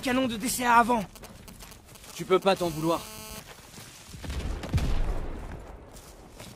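From 1.01 s to 2.57 s you get GSM signalling bursts: a 2G handset close by is firing off short clusters of radio pulses, the kind it sends while setting up a call, and the audio circuitry rectifies them into sound. It comes through as that galloping dit-dit-dit of ticks and brief buzzes with a 217 Hz repeat rate, sitting roughly 15 dB under the wanted sound.

Right at 2.57 s the phone settles into a call and it turns into proper GSM phone buzz, running until 3.40 s. Now the handset is transmitting continuously at 217 bursts a second, so the rectified pulses make a steady, hard, raspy 217 Hz buzz loaded with harmonics. It has nothing to do with the programme material and sits about 16 dB below it.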